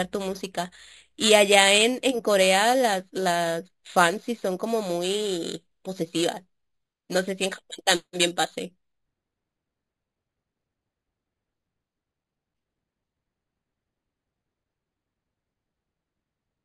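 Imaging from sample-and-hold upsampling runs throughout: each sample was repeated without smoothing, which fits a jump from 11 kHz to 44.1 kHz. A mirrored copy between 5.5 and 11 kHz, about 12 dB down, adds metallic fizz tracking the speech, moving opposite its pitch.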